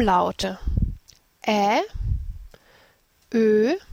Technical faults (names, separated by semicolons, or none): compressed frames skipped